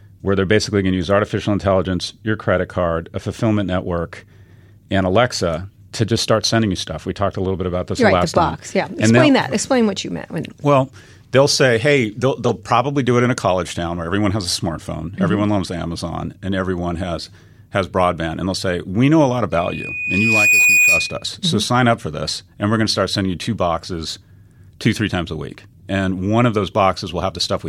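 At 12.45 to 12.51 s a harsh, loud burst of noise breaks through the speech, peaking around -5 dBFS. At 17.25 s a much fainter, brief blip follows. Both are a corrupt frame decoded: damaged bits in the compressed stream were played anyway, so misread gains and codes put energy at the wrong frequencies. Each burst's length fits a couple of codec frames being spoiled.

From 19.52 to 21.25 s a thin tone at 2.5 kHz rises over about a second into a squeal that sits a little above the speech. This is loudspeaker feedback squeal. The microphone is picking up the loudspeaker it feeds, and at 2.5 kHz the loop gain exceeds one, so that frequency keeps reinforcing itself until the amplifier limits it or the loop is broken.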